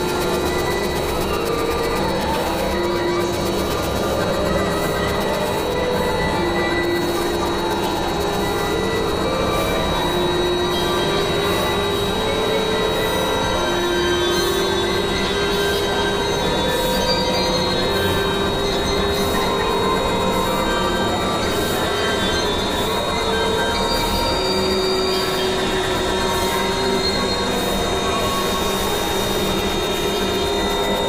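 A sudden voltage step or pulse, likely from a plug, a switch, static or a driver glitch, entered the signal path at 25.29 to 25.31 s. It produces a single loud pop, around 5 dB above the surrounding sound, which carries on underneath.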